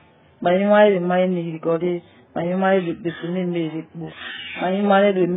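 The speech runs through heavy AAC compression from start to finish, most likely AAC-LC at a bitrate as low as 8 kb/s. Nothing survives above 3.7 kHz, so the audio sounds dull and smeared, with a warbling or fizzy texture where the hearing model has starved bands of bits. A spectrogram would show a flat ceiling at 3.7 kHz across the whole clip, with holes in the spectrum or bands filled with substitute noise.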